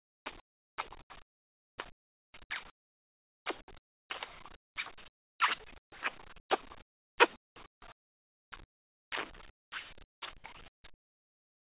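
Across the whole clip, from 0.00 to 11.61 s, the gaps between sounds carry comfort noise in place of the background. About 6.6 s in total is affected. The real room tone drops out in each pause. A flat, featureless hiss takes its place. This is likely discontinuous transmission: the sender's activity detector heard nothing, stopped sending, and the receiver synthesised shaped noise. The call path cuts everything above 4 kHz, which suggests a narrowband G.711 link.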